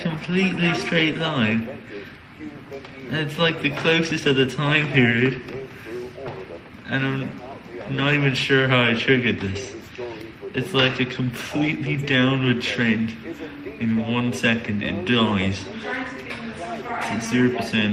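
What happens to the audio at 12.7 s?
Nothing goes wrong at 12.7 s; the audio carries on intact through that moment.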